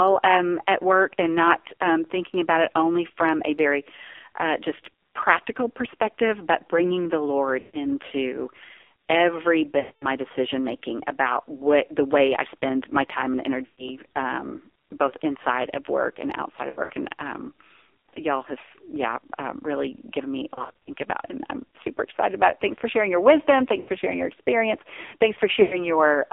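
A speech recording carried over an AMR narrowband mobile codec. The band runs only from about 300 Hz to 3.6 kHz. The voice sounds heavily buzzy and synthetic, which fits a low mode near 5.9 kbps. Lost AMR speech frames break up the sound at 7.60, 9.80, 13.66, 16.70, 20.54, 23.80 and 25.62 s. Each gap lasts between 80 and 220 ms. The decoder stretches the last good sound and fades it toward silence. At 16.70 and 20.54 s the losses are scattered, so the sound warbles rather than dropping out.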